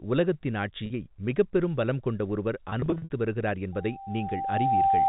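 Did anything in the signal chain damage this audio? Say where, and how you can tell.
Yes. Packet loss with pitch repetition at the network stage: at 0.86 s a 40 ms gap, likely two 20 ms packets, is bridged by a held, buzzy note just before "மிகப்பெரும் பலம் கொண்ட ஒருவர்". From 2.7 to 3.1 s, after those words, scattered losses total 200 ms, with the longest run 60 ms. Repeated pitch periods, not silent holes, set it apart from plain dropouts.

A loudspeaker feedback squeal, from an acoustic loop at the playback end, starts at 3.72 s and lasts to the end. A single 784 Hz tone swells over about a second to about 5 dB above the speech. That self-building growth at one frequency, away from mains frequencies, distinguishes it from electrical hum.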